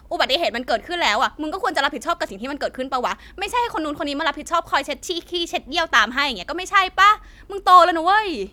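From 0.41 s to 8.29 s, faint clock slip clicks tick through the speech about every half second, around twenty in all, each a single-sample jump. They likely come from two unsynchronised clocks about 50 ppm apart, showing as thin vertical lines on a spectrogram and tiny waveform steps.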